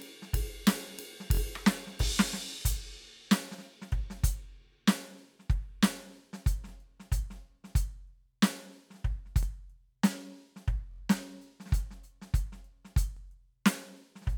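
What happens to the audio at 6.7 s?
At about 6.69 to 6.71 s the music hits a repeated buffer: fresh audio arrived late, so the device replayed its last chunk once more. That roughly 23 ms piece, which fits a 1024-sample buffer, sounds twice with a hard join, giving a quick stutter or click.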